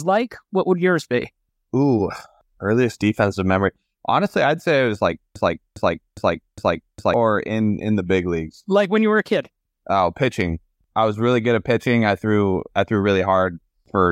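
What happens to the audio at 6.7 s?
At 6.7 s a fragment of about 0.41 s is repeating back to back, four times over from 5.36 to 7.14 s, after "say it was like" and before "in in the big". This broken-record loop most likely comes from a stalled player or stream resending its last buffered piece, and the audio that belonged there is lost.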